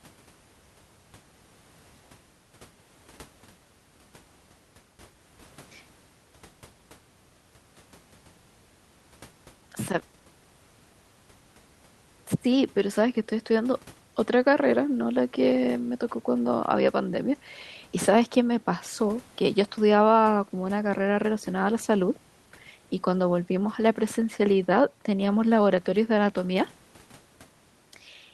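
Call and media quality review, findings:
Nothing to flag here; the speech comes over the call path as you'd expect from a 32 kbps Opus link topping out around 12 kHz, with the room noise sitting about 34 dB below it.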